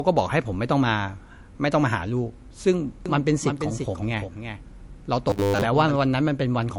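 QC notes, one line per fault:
Throughout: MP3 compression. The speech sounds watery and swirly. This is likely a low bitrate around 48 kbps, where the encoder drops the treble and switches weak frequency lines on and off between frames. S sounds chirp metallically.
3.06 to 5.96 s: doubled audio track. A second full-band copy of the speech runs about 300 ms behind, roughly 5 dB quieter. It has no decay or room colour. It starts and stops abruptly, likely from a slower capture path mixed back in.
5.30 to 5.62 s: robotic sound from repeated short buffers. The speech becomes a rigid metallic buzz at 100 Hz. It still follows the speech loosely. Most of this stretch, around 70 percent, is repeated audio. This fits a 10 ms buffer being replayed while new audio likely arrived too seldom.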